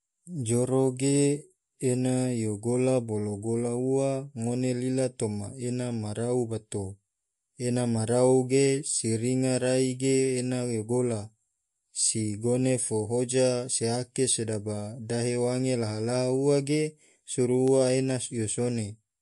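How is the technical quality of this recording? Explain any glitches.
Technical quality is compromised by one fault present throughout the speech. MP3 compression, throughout: the treble stops dead above 11.3 kHz and weak detail flickers between frames, giving a watery, swirly sound with chirpy s sounds, likely from encoding at around 48 kbps.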